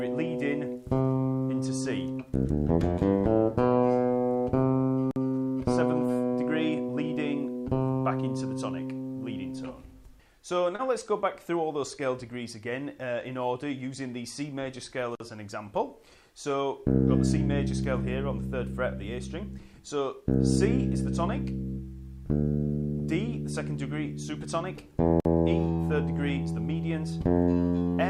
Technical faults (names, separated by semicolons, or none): gap between chunks; short concealed packet loss